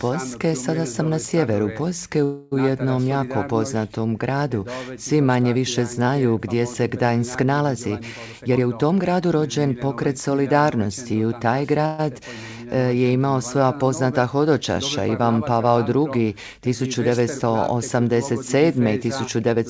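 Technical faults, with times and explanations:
2.24–2.54 s and 11.86–12.01 s, call audio freeze. The sound stalls and the last moment is stretched into a fading buzz, for 276 ms and then 128 ms. Nothing is cut out. The audio resumes exactly where it stopped, so each stall adds its own length to the delay. The likely cause is late packets draining the jitter buffer, with the receiver filling the wait.
8.30–10.03 s and 18.24–19.57 s, jitter buffer speed-up. The sound hurries without any rise in pitch. It runs at 116% in the first stretch and 106% in the second. About 0.3 s and 0.1 s are trimmed away in tiny pitch-period slices. The buffer had built up extra audio, so the receiver drops these fragments to pull the delay back down. The result is a rushed pace.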